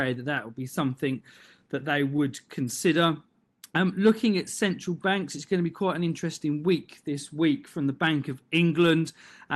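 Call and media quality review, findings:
Brief ticks and small smears, 1.39–2.19 s, just after "that would be something": scattered short gaps, around five, longest roughly 15 ms, about 50 ms patched in total. Probable component: jitter buffer concealment extending the last sound over lost or late packets.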